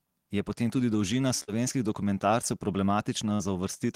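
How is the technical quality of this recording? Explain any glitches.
The speech has two packet-loss glitches, both brief.

From 1.43 to 1.51 s, just after "potem tudi dolžina", there is short concealed packet loss. About 40 ms of audio never arrived. The receiver bridged the hole by extending the preceding sound for roughly 42 ms and then blended back into the real signal. The result is a brief smear or wobble at that point.

From 3.35 to 3.42 s, there is a burst of packet loss. Another 40 ms or so went missing. The decoder continued the last sound for about 47 ms while lowering its level, so the audio briefly holds and fades before resuming further on, with the lost portion gone.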